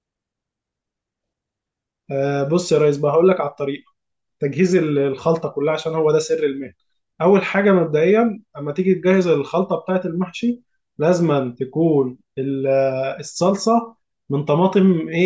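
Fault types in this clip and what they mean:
There are no fault types in this clip.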